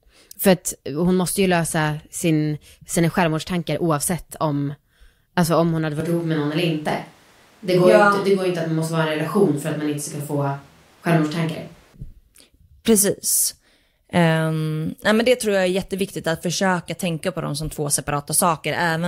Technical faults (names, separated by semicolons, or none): switch to a distant microphone